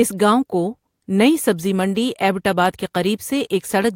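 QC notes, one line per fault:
No audible faults found.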